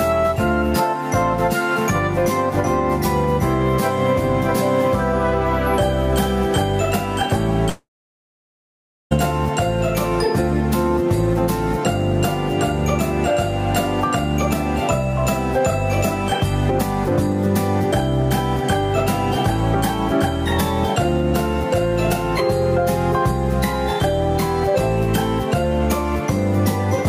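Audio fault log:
throughout, gain pumping. The level keeps rising and falling by around 10 dB. It climbs in the quieter stretches and gets pulled down on each loud sound. The input gain was likely set far too high, with a fast limiter or compressor clamping it back on every loud moment. Loud and soft parts sit closer together than they should. The result is squashed sound that breathes with the loud events.
7.69 to 9.13 s, long network dropout. The audio stops arriving here. The receiver carries the last sound on briefly as a fading buzz or hiss. About 1.25 s of silence follows. The audio returns at 9.13 s. About 1.42 s of material never plays, so the sound jumps ahead rather than resuming where it broke off. A network outage on the transmission path is the likely cause.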